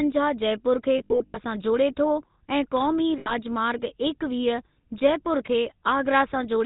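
Speech coded throughout with the GSM full-rate codec, whose damage is plainly audible as a buzzy, gravelly roughness. The coder models the vocal tract and excites it with a regular pulse train built from a decimated residual, so fine detail is replaced by a coarse, rasping texture, which fits a 13 kbps full-rate stream. On a spectrogram everything above 4 kHz is empty, with a hard ceiling, and the harmonics below look grainy and smeared. Lost GSM frames appear twice. The first is between 0.98 and 1.38 s, after "जयपुर खे" and before "सां जोड़े". About 220 ms of audio is missing, scattered over 360 ms, with the longest gap roughly 70 ms. The second runs from 3.18 to 3.35 s and loses 80 ms. At each gap the decoder repeats the last good frame, producing a brief metallic ring. On a spectrogram this shows as frozen, flat harmonic bands, and on the waveform as repetitive stretches.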